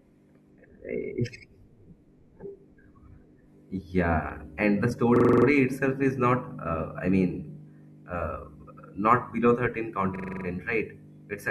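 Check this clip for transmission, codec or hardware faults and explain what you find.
Two hang loops break the speech, at 5.16–5.46 s and 10.16–10.45 s. In each, the system hang loop replays one 43 ms slice seven times, a 23 Hz stutter. The length fits a 2048-sample buffer cycling while the system was frozen. Unlike a dropout, it repeats identical sound rather than falling silent, and almost nothing is lost.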